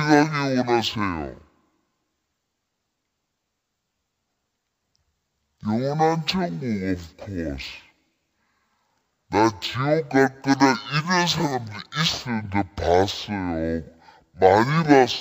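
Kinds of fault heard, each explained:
Stereo read as mono: The speech runs at half speed and sits a full octave low, 12 semitones down, so everything sounds slowed, dragged and deep from start to finish. This happens when a two-channel file is played back as one channel. The alternating left and right samples are taken as consecutive samples of a single stream, so each moment of sound lasts twice as long and every frequency is halved.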